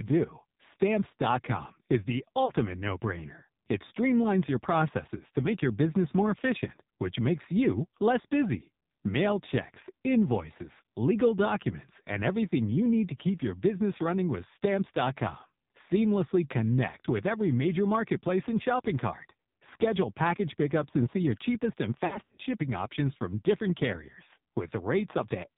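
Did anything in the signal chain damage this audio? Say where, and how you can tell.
Yes. At the codec stage, AMR narrowband mobile codec coding at a low mode, consistent with about 5.9 kbps, strips everything above 4 kHz and leaves the speech buzzy and synthetic throughout.

In the network stage, lost AMR speech frames cause a brief warble from 2.46 to 2.52 s, then drawn-out, fading concealment from 22.06 to 22.41 s, where the decoder repeats old parameters.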